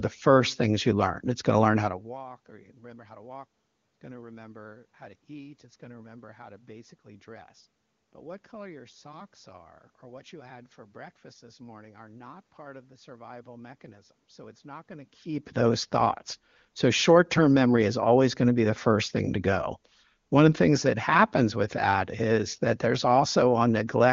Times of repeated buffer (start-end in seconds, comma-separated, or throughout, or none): none